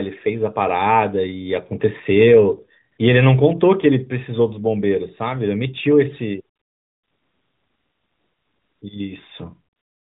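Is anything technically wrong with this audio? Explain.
Yes. The speech carries the AMR narrowband mobile codec, with nothing above 4 kHz and light coding damage that fits its highest 12.2 kbps mode. The fault is AMR comfort noise, at 2.92–2.98 s, 6.56–8.82 s, and 9.76 s to the end. In each span the sender stopped transmitting speech frames, and the receiver filled the gap with smooth, steady synthetic hiss shaped only roughly like the real background. Unlike a noise gate or a dropout, the gaps are not silent. The hiss switches in and out, and the real room sound disappears for the whole 2.26 s middle stretch.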